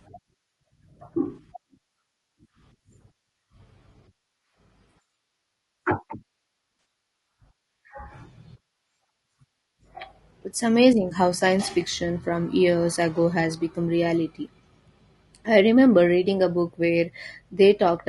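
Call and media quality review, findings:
Low-delay AAC compression, throughout: rough, grainy speech with noise between harmonics and a dulled top band. Likely AAC-ELD, whose short frames resolve pitch harmonics poorly, at a rate that fits roughly 32 kbps. Damage plainly audible across the whole clip.

AAC frame loss with concealment, 1.35 to 1.39 s: brief smeared, noisy patch of about 20 ms, consistent with one lost frame. Decoder patched the gap from the last good spectrum, so the gap is smeared rather than silent.

AAC frame loss with concealment, 6.79 to 6.85 s: longer smeared, phasey stretch of about 60 ms, which fits three consecutive lost frames. Concealment repeats and reshapes the previous spectrum across the gap.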